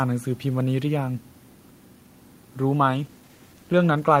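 At 2.88 s the call's bandwidth estimate falls and the encoder must spend far fewer bits. This call bitrate drop sounds like a halving, from about 32 to 16 kbps. Coarser coding leaves the speech rough and watery through to the end.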